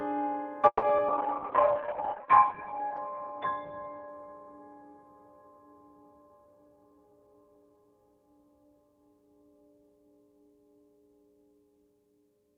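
At 0.67 s a call audio freeze begins. The last sound stretches into a fading buzz, then 50 ms of silence, likely from packets delayed in transit. Playback resumes at 0.84 s, 150 ms late, with nothing lost.

Short concealed packet loss follows at 0.88 s and 0.97 s. Each 20 ms hole is patched by extending the preceding sound, leaving a brief smear.

From 1.09 s to 5.64 s a call bitrate drop takes hold. The encoder falls from 64 to 6 kbps and bandwidth narrows from 20 kHz to 4 kHz. The sound turns muffled and rough, worst for about 1.2 s.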